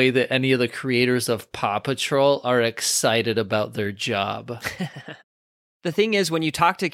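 No technical faults are audible.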